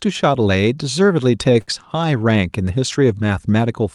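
A short stall from a late packet hits this speech clip at 1.61 to 1.84 s: the jitter buffer ran dry, so about 62 ms of held sound stretches the last sound before playback resumes, with the Opus call path limiting the bandwidth to 12 kHz throughout.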